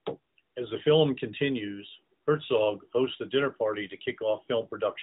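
No technical faults can be heard in this speech.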